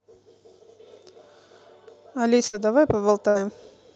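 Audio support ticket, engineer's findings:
Burst of packet loss at 2.47–2.55 s and 3.29–3.37 s: about 58 ms of concealment buzz/fade each, then resumes with roughly 60 ms of speech skipped. Jitter buffer/loss concealment on the call path, audio band topping out near 8 kHz.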